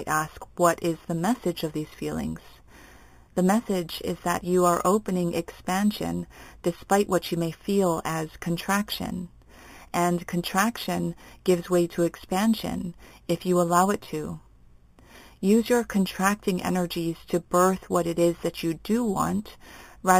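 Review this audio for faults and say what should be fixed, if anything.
Imaging from sample-and-hold upsampling runs throughout. Repeated samples, which point to 8 kHz audio raised to 44.1 kHz, mirror the speech into 4 to 8 kHz. The result is a metallic fizz about 16 dB down that moves against the pitch, unlike distortion harmonics. Upsample with a proper interpolating low-pass filter rather than by repeating samples.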